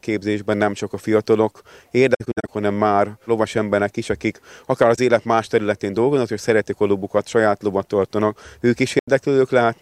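AAC frame loss with muting leaves soft-faded silences: scattered dropouts at 2.14–2.49 s after "nem csak a fiatalok", a brief hole at 4.96–4.99 s before "élet más területén dolgoznak", and 8.98–9.08 s. Zeroed spectrum shows as full-band spectrogram gaps with tapered, click-free waveform edges.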